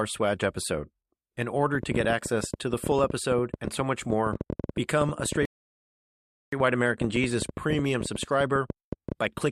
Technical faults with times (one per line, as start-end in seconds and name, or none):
1.75-9.39 train of clicks
5.45-6.52 rebuffering stall